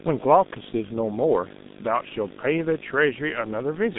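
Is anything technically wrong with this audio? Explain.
Yes. Two faults run through the whole clip.

Video or display buzz is present from start to finish. A screen or video cable is leaking into the audio path. It adds a 50 Hz buzz with hash above it, sitting well below the speech. There is also a very high 15.6 kHz line tone.

The speech also carries heavy G.723.1 codec damage throughout. The band runs only from about 150 Hz to 3.7 kHz, with nothing above 3.8 kHz. The slow, coarse coding fits a bitrate of around 6 kbit/s. The result sounds muffled and hoarse, with smeared consonants.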